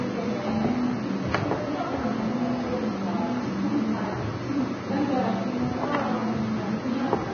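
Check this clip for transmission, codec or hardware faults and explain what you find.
One codec fault runs through the whole clip: heavy Vorbis compression. Nothing survives above about 6.5 kHz. What remains of the treble is coarsely quantised, so fine detail turns into hiss and grain. Tones sound roughened and attacks blur. This likely comes from a very low bitrate, around 19 kbps.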